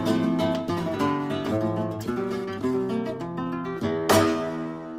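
Around 1.51 to 1.53 s there's a skip ahead: roughly a second of audio just goes missing and playback lands straight on later material, with nothing filled in at the join. The jitter buffer or the network dropped that stretch while newer audio was already queued.

Right after, from 1.57 to 2.78 s, you get a jitter buffer speed-up at 115%, then again from 3.18 to 4.93 s at 111%. The buffer was over its target, so it kept trimming tiny pitch-period-sized slices, about a fifth of a second in total in each stretch. Pitch holds, but the sound comes across hurried.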